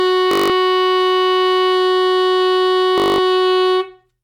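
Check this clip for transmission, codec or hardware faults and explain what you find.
Two bursts of Bluetooth stutter interrupt the music, from 0.31 to 0.50 s and from 2.98 to 3.18 s. Each is a rapid machine-gun buzz of one short slice repeating. The receiver kept replaying its last buffer while about 183 ms and 203 ms of data went missing, which fits a run of roughly nine or ten lost packets. The music then resumes further along, as though it had played on.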